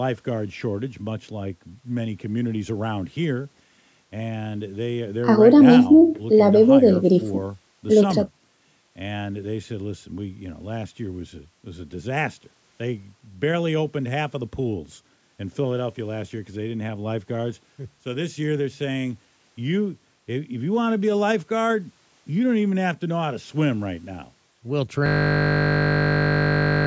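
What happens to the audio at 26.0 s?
At 26.0 s the sound is caught in a system hang loop that begins at 25.06 s and runs to the end of the clip. The playback path stalled while the audio hardware kept replaying the same small slice of its ring buffer, so a 20 ms fragment repeats back to back over and over. Because the loop is so short, it fuses into a steady buzz at 50 Hz rather than a stutter.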